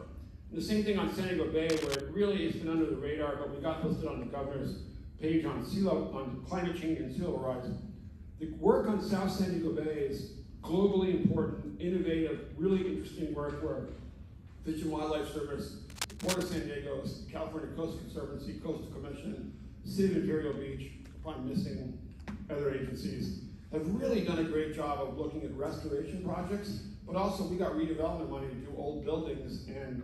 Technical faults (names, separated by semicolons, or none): cable scratch noise